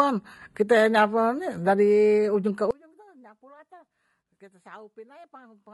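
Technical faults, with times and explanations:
Throughout, low-delay AAC compression: the speech sounds plainly rough and grainy, with noise filling the gaps between harmonics and a thin, synthetic top band. This is likely AAC-ELD at around 32 kbps, where short frames resolve pitch harmonics poorly and spend bits inefficiently.
2.71 s to the end, audio dropout to a faint residue: the speech cuts off abruptly mid-flow and does not return. What remains is a faint leak of sound, roughly 25 dB below normal level, likely because the signal path stayed live after the source was lost.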